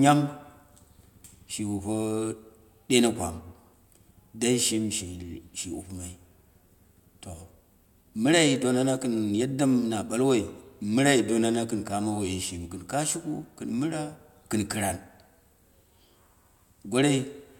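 Listening to the speech closely, nothing stood out as a technical fault at any point.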